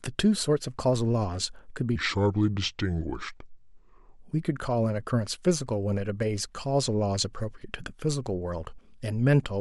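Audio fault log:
1.96–4.19 s, section at the wrong speed: the speech slows to about 0.75 times its recorded rate, so it drags and drops roughly five semitones deeper, with pitch and pace falling together. The likely cause is this stretch being played against the wrong clock.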